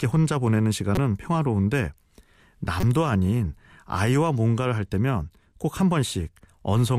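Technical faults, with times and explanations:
0.95–0.98 s and 2.80–2.84 s, corrupt frame decoded: flipped bits inside compressed frames were decoded anyway, so misread gains and codes put energy at the wrong frequencies for roughly 30 ms each time. The result is a sharp chirp or noisy blip reaching about -10 dBFS. The first burst suggests a few consecutive damaged frames, the second a single frame. On a spectrogram each shows as a short block of misplaced energy, and the waveform shows an abrupt burst.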